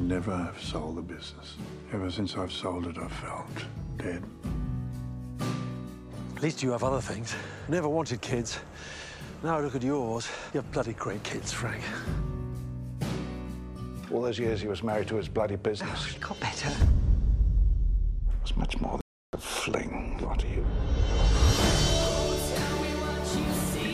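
At 19.01 s a playback stall silences the sound for about 0.32 s, likely from the player starving of data; the waveform shows a flat gap, the spectrogram a blank column.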